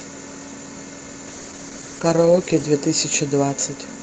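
A call bitrate drop runs from 1.29 s to 2.87 s in this speech clip, which passes through an Opus call path band-limited to 8 kHz. The encoder's budget collapses, sounding like a fall from about 48 kbps to around 11 kbps for roughly 1.4 s, so the audio is coded far more coarsely and turns rough and watery until the bitrate recovers.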